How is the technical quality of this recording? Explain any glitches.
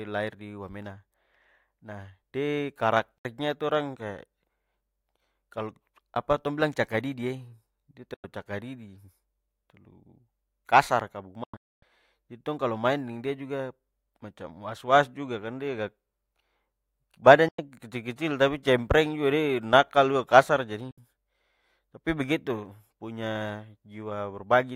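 The speech is interrupted five times by digital broadcast dropouts, at 3.18, 8.14, 11.44, 17.48 and 20.91 s. Each time the receiver lost valid frames and muted with a fast fade, leaving silent holes of 64 to 96 ms in four of them. At 11.44 s, just after "kasar ka", the holes scatter over 0.38 s, the longest about 256 ms. The first ends just before "itu orang kaya". The gaps fit roughly 32 ms frames, and the audio sent during them is gone.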